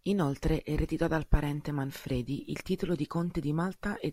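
No technical fault can be heard anywhere in the speech recording, and the signal stays intact and continuous throughout.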